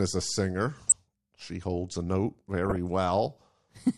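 Weak DAB reception lets bit errors slip past the error correction into the MP2 audio data, causing DAB burbling twice. From 0.80 to 0.92 s, just after "a singer", corrupted samples put short noise blips in single sub-bands and corrupted scale factors make sub-bands jump in level for up to a frame. This gives a burbling of noise blips over the speech that fits roughly eight damaged frames and a bit error rate near 0.4 percent. From 2.66 to 2.76 s the burbling returns, with a lower error rate behind it.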